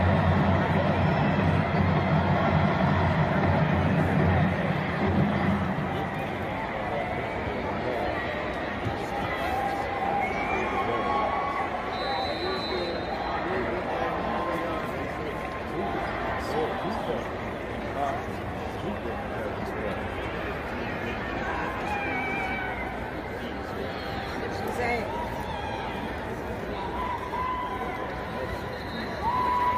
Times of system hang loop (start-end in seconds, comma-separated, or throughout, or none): none